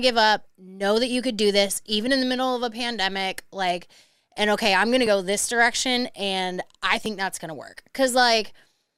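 Speech clip with an overlap between stream segments: where adjacent one-second segments have overlapping time stamps, the player trims audio that was never actually duplicated, so a few milliseconds go missing and the waveform jumps, heard as brief clicks or tiny skips at 5.07 s and 7.06 s.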